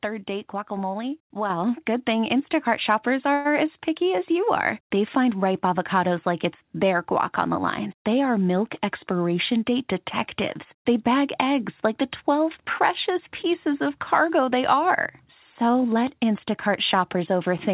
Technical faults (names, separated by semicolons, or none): microphone volume stepped up; call audio freeze; jitter buffer speed-up